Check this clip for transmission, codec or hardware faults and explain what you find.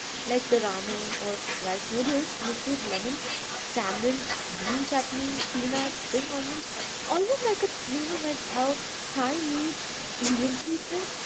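Two faults stand out: an echo leak running through the whole clip, and a brief case of speech suppressed in double talk near the end.

From start to finish, a delayed copy of the speech trails the original by about 0.36 s at roughly 10 dB below it. The likely cause is a far-end loudspeaker whose echo canceller let part of its microphone pickup return. A fixed lag and a recognisable repeat of the speech distinguish this from room reverberation, which smears rather than repeats.

From 10.64 to 10.78 s the speech dips sharply, by around 20 dB at its deepest, over roughly 150 ms. An echo canceller confused by both sides talking at once likely suppressed the near talker like this. This differs from a packet-loss dropout, which ignores what the other side is doing. The 8 kHz band limit of the call path is expected behavior.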